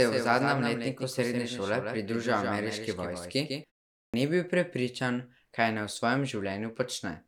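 From the very first moment up to about 3.64 s there's a doubled audio track. A second copy of the speech runs roughly 150 ms behind the original and sits only a few dB lower, so everything sounds smeared and slightly slapback-y, but without any room tail or decay on the repeat. That's most likely the same signal being picked up twice, once through a slower path. At 3.64 s the copy just cuts out abruptly.

Then at 3.96 s, after a pause of about 0.33 s, there's a clipped start after a pause. The first 176 ms of the sound coming out of that gap, running to about 4.14 s, is simply missing, so the speech jumps in hard with its opening sounds gone. The output device seems to have dozed off during the pause and needed that time to come back.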